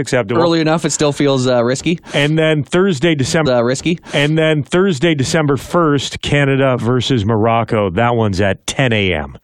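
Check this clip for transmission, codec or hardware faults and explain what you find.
One fault is present. At 3.45 s to 5.45 s a stream segment is repeated: the player fetched or queued the same segment twice, so about 2.0 s of speech replays after a small blip at the jump back. The waveform and spectrogram show an identical block duplicated with a sharp seam.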